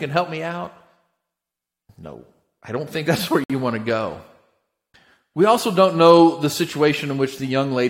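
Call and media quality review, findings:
Gap between stream segments at 3.44–3.50 s, right after "don't think that's where", before "you want": hard-edged hole of about 59 ms of silence. Likely the segmenter's timestamps leaving a gap at a 4 s segment boundary, with the player padding it with silence.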